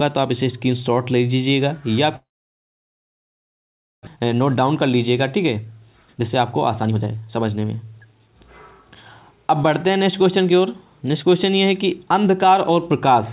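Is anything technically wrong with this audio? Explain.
Yes, there are two faults, heard through a narrowband call path whose spectrogram shows nothing above 4 kHz, which fits G.711 A-law at 64 kbps.

From 2.16 to 4.09 s there is a long network dropout, likely from packets that stopped arriving. The receiver briefly extends the last sound before it fades to near-silence for most of the gap. About 1 s of audio is never heard. On a spectrogram this appears as a blank band. The waveform flattens.

From 4.17 to 8.83 s a jitter buffer speed-up runs the audio at 119% speed without changing its pitch, so it sounds hurried. The buffer had built up extra delay, and the receiver trimmed short pitch-period pieces, about a second in all. Events sit visibly closer together on both displays.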